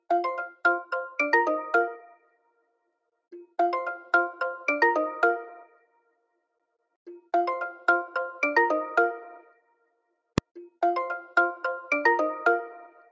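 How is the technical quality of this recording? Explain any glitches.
Technical quality is compromised by two kinds of fault: repeated dropouts from the noise suppressor and a single full-scale bang.

Sound cut by the noise suppressor occurs at 2.0 to 2.78 s, 5.65 to 6.27 s and 9.44 to 10.11 s, each covering roughly half a second or a bit more. The suppressor misjudged this sound as noise and attenuated it by up to about 19 dB, so the level sinks noticeably and sustained or decaying portions are clipped short.

Invalid numbers at full scale occur once, at 10.38 s. A calculation produced infinite or invalid values, which were forced to maximum amplitude for a 1.33 ms block, consistent with a 64-sample block. Being so brief, it is heard as one loud, sharp bang.

The bandwidth, which stops at 8 kHz, reflects the call microphone processing path.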